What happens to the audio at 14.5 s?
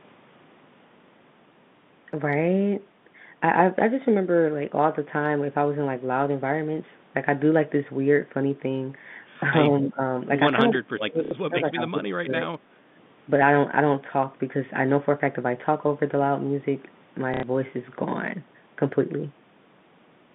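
Nothing goes wrong at 14.5 s: the speech carries on intact through the G.711 telephone coding, which keeps it within the usual narrow phone band of about 150 Hz to 3.6 kHz.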